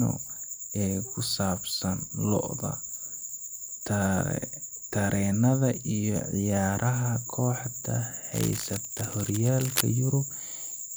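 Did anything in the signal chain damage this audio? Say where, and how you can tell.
Yes, in the analogue wiring: from 8.32 to 9.83 s a dense, uneven scratching rides over the speech, roughly 10 dB below it. This is cable scratch noise, likely a worn connector whose contact resistance fluctuates. A spectrogram shows ragged broadband bursts; the waveform shows jagged spikes.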